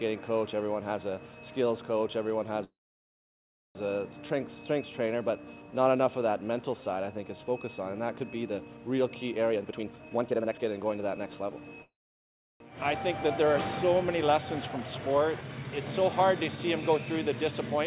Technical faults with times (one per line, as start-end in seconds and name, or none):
2.64-3.77 call audio freeze
9.50-11.80 jitter buffer speed-up
11.82-12.62 call audio freeze